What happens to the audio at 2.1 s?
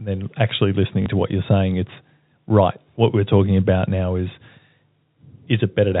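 Nothing goes wrong at 2.1 s; the speech carries on intact through that moment, with only the narrow, band-limited character of G.711 telephone coding that runs through the whole clip.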